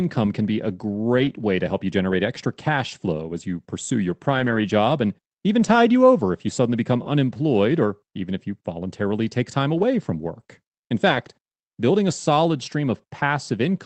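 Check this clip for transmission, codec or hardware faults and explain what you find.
The clip has one recurring fault: lost packets rebuilt from error correction, on a call path limited to about 8 kHz.

Lost packet rebuilt from error correction occurs at 1.17–1.31 s, 2.11–2.13 s (between "way to help you" and "extra cash flow as"), 4.31–4.57 s, 5.59–5.77 s (after "job and even", before "you over if you"), 7.05–7.07 s, 9.77–9.83 s, and 11.09–11.19 s (before "building a solid"). The decoder replayed low-bitrate copies carried in the following packets, so these 20–140 ms stretches turn briefly rough and noisy. The sound never drops out. Packet loss concealment, by contrast, would smear or repeat the preceding sound.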